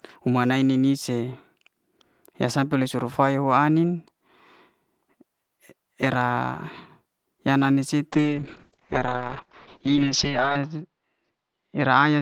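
At 8.13 s a call bitrate drop sets in and lasts to the end of the clip. The call's bandwidth estimate fell and the encoder was pushed to a much lower rate, a coarseness that fits a fall from about 32 kbps to about 6 kbps. The coded band narrows from 20 kHz to 8 kHz, so the speech turns muffled and rough, with a watery texture at its worst for about 2.43 s.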